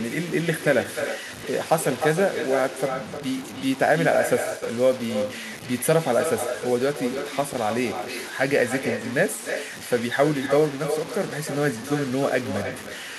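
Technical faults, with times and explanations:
throughout, low bit depth without dither: the speech carries a coarse, grainy distortion that rises and falls with the voice, and quiet passages and word endings turn gritty or sputter instead of fading smoothly. The error sits not far below the speech, roughly 15 dB down. This likely comes from the signal being cut to about 5 bits by simple truncation with no dither, so the rounding error tracks the waveform instead of becoming steady hiss.
throughout, echo with no canceller: every phrase is trailed by a quieter, thinner copy of itself, arriving roughly a third of a second later, about 7 dB below the direct speech. The far end is playing the audio over a loudspeaker, its microphone picks that playback up again, and nothing subtracts it, so the voice returns after a network round trip near 300 ms.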